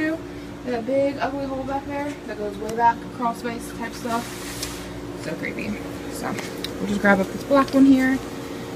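No technical faults detected.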